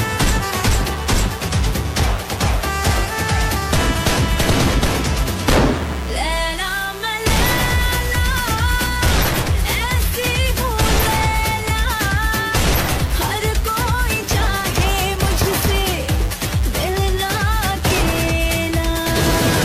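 Mains buzz runs throughout, a raspy 60 Hz buzz about 20 dB below the sound, from switching spikes twice per mains cycle spraying harmonics into kilohertz.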